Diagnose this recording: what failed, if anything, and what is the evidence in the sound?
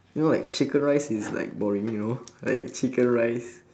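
Burst of packet loss, network stage, at 0.43 to 0.70 s and again at 2.53 to 2.71 s: each time about 100 ms of concealment stretches the last sound into a fading buzz or hiss, then speech resumes with roughly 60 ms of it skipped.

Jitter buffer speed-up, buffer stage, from 1.48 to 1.75 s: speech runs about 13% fast at unchanged pitch, sounding briefly hurried. The receiver trimmed short pitch-period slices, around 40 ms in total, to drain excess buffered audio and reduce delay.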